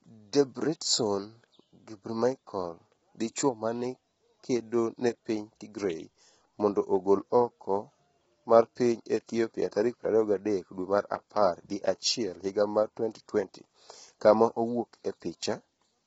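Throughout, likely low-delay AAC compression squeezed into a very low bitrate, so the speech turns rough and grainy, with noise between harmonics and nothing above 7.8 kHz.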